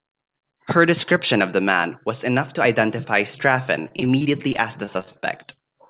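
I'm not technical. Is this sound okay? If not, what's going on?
No. From 3.88 to 5.58 s there is repeated packet loss (robotic sound). On its way through the call, small pieces of the speech kept getting lost or arriving too late, about two dozen times, each hole no longer than 25 ms. The receiving end filled each hole by stretching the last bit of sound it had, so this stretch sounds choppy with pieces missing, with roughly a sixth of it patched over.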